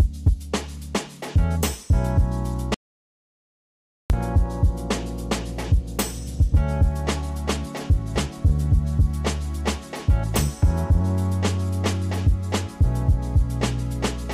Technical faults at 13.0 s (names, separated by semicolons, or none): none